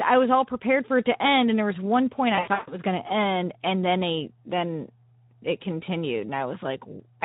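From start to finish the speech carries Speex codec damage that is plainly audible. The character fits a Speex encode at around 11 kbps: with so few bits for the excitation signal, the voice sounds hoarse and grainy, with a noisy roughness laid over the voice. Pitch and filter are reconstructed only coarsely, so the speech loses its natural smoothness.

Between 2.35 and 2.74 s, after "there was one point" and before "going to end and", there is VoIP packet loss concealed by the speech codec. About 240 ms of audio goes missing, scattered across a 320 ms span, which points to around a dozen lost frames, with the longest continuous gap 140 ms. During each gap the decoder keeps extending its last pitch and filter state at falling gain, so the speech smears into a buzzy tone or a coloured noise that fades away. Because each frame is predicted from the previous one, the voice stays weak and distorted for a short time after packets resume.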